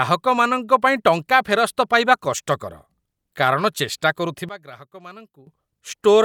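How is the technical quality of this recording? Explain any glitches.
The recording has one glitch. One channel inverted, from 4.49 to 5.47 s: the speech drops by about 19 dB. The likely cause is reversed polarity on one stereo channel, so the shared sound cancels when summed to mono, leaving only the small difference between the channels.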